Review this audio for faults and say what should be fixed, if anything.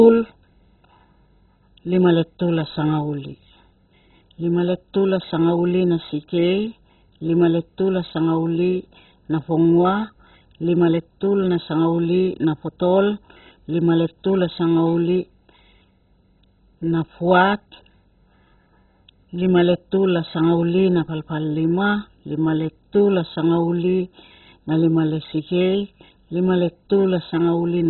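Throughout the speech, the sound is dull and gurgling, with a granular, watery distortion, most likely from heavy MP2 compression at a very low bitrate, which fits roughly 16 kbps. MPEG Layer II divides the signal into 32 sub-bands. Starved of bits, it switches the upper bands off entirely and coarsely quantises the rest, so nothing survives above about 4.1 kHz. On a spectrogram this appears as a hard ceiling near 4.1 kHz, with blocky patches below it flickering on and off. To prevent this, encode from the original at a much higher MP2 bitrate or use a more efficient codec.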